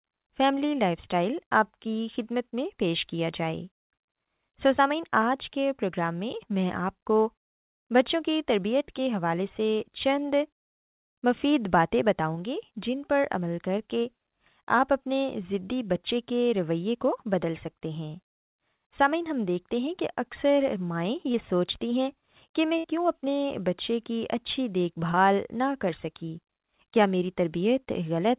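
At 21.32 to 21.36 s comes a short concealed packet loss. About 20 ms of the speech never arrived in time. The receiver patched the hole with roughly 16 ms of continued sound and blended back in. It is heard as a brief smear in the speech.

At 22.78 to 22.86 s a burst of packet loss follows. About 60 ms went missing in a row. The receiver held the last sound for about 62 ms and faded it. It is heard as a short held buzz or hiss, and the speech resumes with that stretch gone.

At 25.12 to 25.15 s there is a second short concealed packet loss. Again about 20 ms was lost and roughly 15 ms was filled in. It gives another quick smear or wobble, and a brief sound may drop out. Throughout, nothing is heard above 4 kHz, which fits a narrowband call codec such as G.711.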